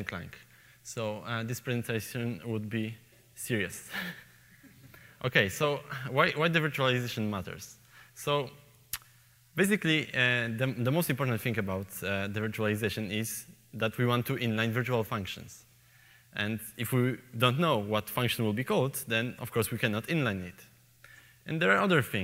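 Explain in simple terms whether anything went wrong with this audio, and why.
Nothing went wrong here; listening all the way along, there's no moment where the sound slips, stumbles or gets damaged, so there's nothing to point to or explain.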